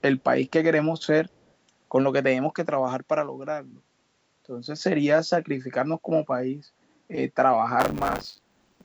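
Speech recorded through call microphone processing, with two faults. From 1.35 to 1.5 s a very faint delayed copy of the voice, about 40 dB down and trailing by 135 ms, comes through. This is likely an echo leak from a far-end loudspeaker that the echo canceller missed, and it differs from room reverb because it is a discrete, separated repeat rather than a smooth decay. From 7.79 s to the end, buffer tearing produces a rattling 100 Hz buzz. Roughly a fifth of each 10 ms period is replaced by audio some 40 ms old, and unlike mains hum the buzz disappears whenever the speech does.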